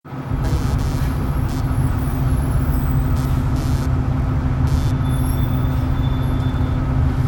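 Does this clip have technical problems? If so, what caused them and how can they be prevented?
Yes. A block size mismatch (truncated) runs through the whole clip. One stage writes longer blocks than the next stage reads. The tail of each block is discarded. Every cut leaves a small jump in the waveform. These jumps repeat as a steady buzz at 43.1 Hz. That rate fits a 1024-sample block. The speed and pitch of the sound stay close to normal. To prevent it, set every stage in the chain to the same buffer size.

Computer activity noise appears from 0.44 s to 4.91 s. Changes in the computer's processing load disturb the ground shared with the audio circuit. That disturbance leaks into the signal. It is heard as a buzzing, chirping pulse at around 150 Hz. It sits roughly 25 dB below the sound. It follows the computer's activity, not the audio. To prevent it, use an isolated or external audio interface, or break the ground loop.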